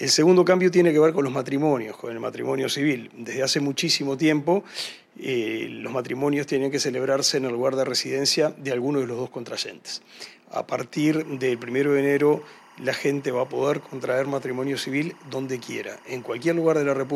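Linear timecode leaks in from a nearby line from 10.96 s to the end: timecode bleed, a faint chirping warble near 1 and 2 kHz.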